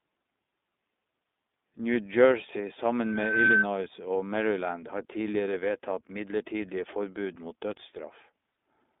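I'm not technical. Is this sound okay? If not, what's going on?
No. Throughout the speech, the sound is thin and boxy, like an old phone call: nothing below about 250 Hz or above about 3.6 kHz, and voices have a slightly rough, artificial edge. This is the iLBC codec, a compression method built for internet phone calls. It chops the sound into 20 ms slices and rebuilds each one from a compact description. This keeps the data small but loses detail you can plainly hear.

From 3.03 to 3.65 s, a single high whistle at about 1.5 kHz rises over roughly 0.4 s into a piercing squeal. That's a loudspeaker feedback squeal. A microphone was picking up the very speaker it was feeding, so the sound went round and round in a loop. One pitch kept getting louder each trip until it turned into a howl, briefly rising a little above the speech level.

There are two tiny hiccups, from 3.46 to 3.48 s (20 ms) and from 8.52 to 8.56 s (40 ms), where the sound becomes a brief buzzy, held vowel-like smear. 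These are lost iLBC frames. Pieces of the call's data never arrived, so the decoder filled the gap by repeating the last bit of sound mixed with a little noise. The speech snaps back to normal straight after each one.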